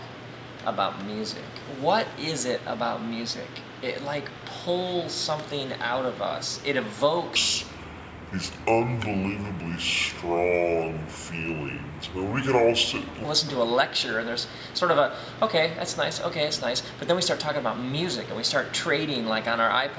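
Wrong sample rate from 7.36 to 13.25 s: the sound runs at two-thirds speed and drops about 7 semitones, so it turns low and dragging. That fits 24 kHz material played at 16 kHz without conversion, stretching speed and pitch together.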